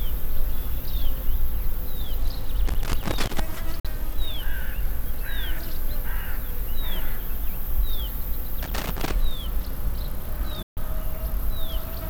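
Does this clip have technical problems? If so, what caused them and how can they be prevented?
Yes. A worn or dirty contact in a cable or jack is making and breaking as it moves, causing loose connector crackle from 2.68 to 3.40 s and again from 8.63 to 9.13 s. The signal is chopped into irregular scratchy bursts, with pops where DC on the line jumps. Cleaning or replacing the connector and securing the cable so it cannot flex will prevent this.

Audio packets likely failed to reach the Bluetooth headphones in time and were dropped, leaving Bluetooth dropouts at 3.80 to 3.85 s and 10.62 to 10.77 s. The sound cuts to silence for 46 ms and then 139 ms, and resumes further along. Keeping the headphones closer to the source, away from obstacles and crowded 2.4 GHz interference, will prevent these gaps.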